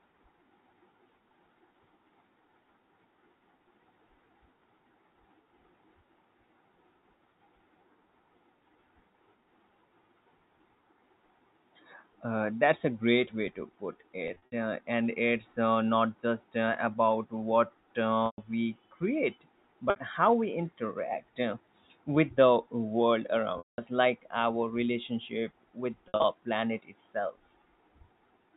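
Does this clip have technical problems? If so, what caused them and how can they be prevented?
Yes. There is packet loss with pitch repetition at 14.28–14.52, 18.26–18.38, 19.90–19.96, 23.58–23.78 and 26.08–26.24 s. In each gap the receiver loops the last pitch period, so the sound holds on a buzzy tone and fades instead of clicking or dropping abruptly. Jitter buffering and forward error correction would reduce these losses.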